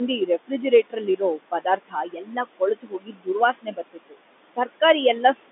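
Throughout the recording, a noise suppressor keeps pulling down whatever bands it judges to be steady background, by about 20 dB, and it recomputes that judgement frame by frame. The room noise, sitting about 15 dB under the speech on a narrow telephone line, therefore drops away in the gaps and swells back under each phrase. These are noise suppressor artifacts.

The same suppressor also mistakes parts of the speech for noise, so speech is cut by the noise suppressor in three stretches. From 0.19 to 0.51 s, around a tenth of a second of sound is turned down by up to about 13 dB. From 0.83 to 3.28 s, roughly one and a half seconds in total lose up to about 21 dB. From 3.53 to 4.16 s, a little under half a second drops by up to about 20 dB. Soft consonants and word endings in those spans sound swallowed or faint.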